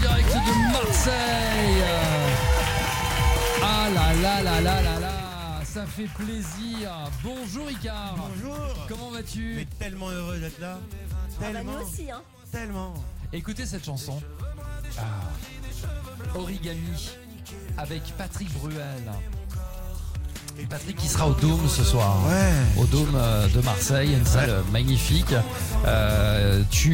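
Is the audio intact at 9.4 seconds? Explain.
Yes, the audio is intact at 9.4 seconds, with no dropout, distortion or other fault there.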